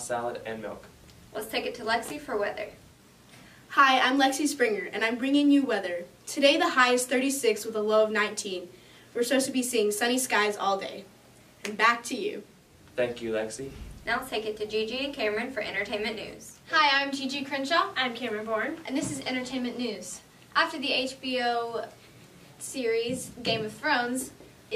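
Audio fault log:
No faults can be heard anywhere in the audio.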